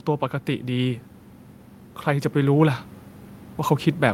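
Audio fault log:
2.04–2.89 s, automatic gain rising: the speech and the background noise beneath it swell together by about 4 dB over under a second. The automatic gain control judged the input too quiet and gradually raised its gain, lifting everything at once.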